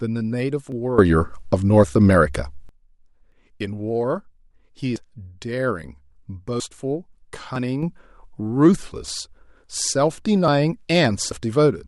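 At 0.72 s the speech skips forward, losing a few hundredths of a second. That's a dropped buffer (overrun): the samples likely weren't collected before the hardware overwrote them, so the two sides butt together with no gap. The same jump recurs at 3.32, 4.96, 6.6 and 10.48 s, the last three cutting out a bit more, about 70 ms. Between 0.98 and 2.69 s there's a sudden gain jump of about 16 dB, speech and background noise leaping together, likely from a gain change applied in one sample with no ramp. A smaller jump of about 6 dB starts at 7.83 s and stays to the end.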